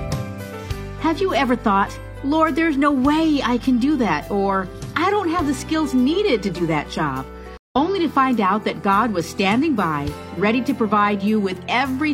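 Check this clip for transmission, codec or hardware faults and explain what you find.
There's one fault, a stream reconnect at 7.57 to 7.76 s. The connection dropped and the player fell silent for about 0.14 s, then restarted decoding mid-stream. So the sound picks up roughly 150 ms further along, and that little stretch is simply missing.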